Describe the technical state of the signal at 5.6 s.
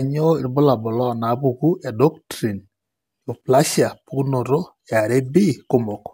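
At 5.6 s the speech carries the crude rate conversion that runs through the whole clip. Samples were simply repeated to reach the new rate, with no interpolation or filtering, and the 2:3 stepping pattern fits a jump from 32 kHz to 48 kHz. That regular error adds shifted, inharmonic copies of the speech, sitting around 25 dB below it. You hear a gritty, inharmonic fizz riding on the louder and brighter parts of the speech.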